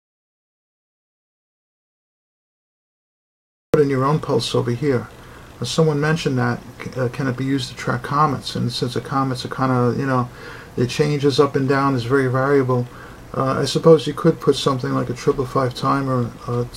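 Audio dropout to silence runs from the very start to 3.74 s: the clip opens already inside the gap, with dead digital silence and not even a trace of room tone, and the sound only arrives when the input returns mid-flow at 3.74 s. The likely cause is an input that went missing, such as a disconnected device, a broken link or an accidental mute, while the recorder kept writing silence, so whatever happened during those first seconds is lost.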